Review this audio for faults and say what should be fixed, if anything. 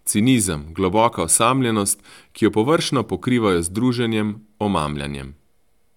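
No faults heard in this recording; nothing needs fixing.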